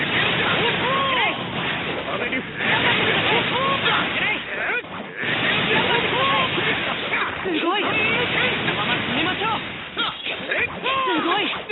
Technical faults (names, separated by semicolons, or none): none